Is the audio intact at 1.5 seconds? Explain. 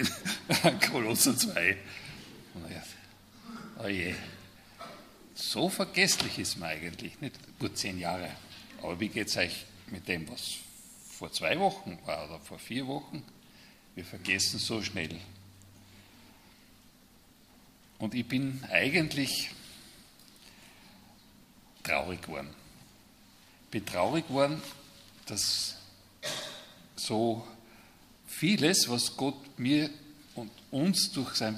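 Yes, at 1.5 seconds the audio is intact, with no dropout, click, distortion or other fault to be heard.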